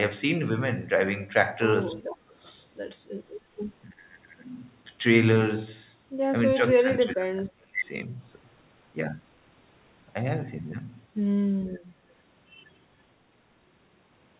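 Speech suppressed in double talk at 2.02 to 2.33 s, 3.87 to 4.0 s and 6.52 to 7.87 s: the speech drops by up to about 40 dB, 25 dB and 30 dB, likely because the echo canceller mistook overlapping talk for echo and turned everything down. Echo leak at 2.46 to 2.52 s: a faint copy of the speech, about 35 dB down, returns 284 ms late, likely a residue the canceller failed to remove. The whole clip stops at 4 kHz, which fits G.711 A-law.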